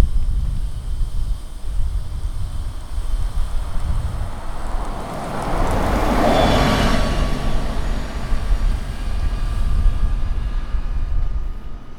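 At 4.67 s, compressed frames are skipped. About a tenth of a second of sound never plays, which fits roughly four frames of about 26 ms each. The waveform shows a sudden change in shape with no gap.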